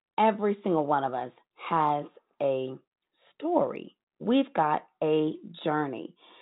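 Nothing here counts as a fault, just speech coming over an ordinary WebRTC call path using G.711 mu-law, which gives it that familiar phone-line top end with nothing above 4 kHz.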